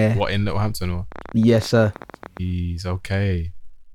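From 1.12 to 2.38 s, uneven ticking rides over the speech: a train of clicks, about twenty at roughly 18 per second, peaking a few decibels above the voice, likely interference from nearby equipment.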